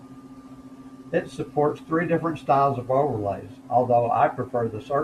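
No technical faults can be heard anywhere in this speech clip. Nothing in the signal chain draws attention to itself at any moment.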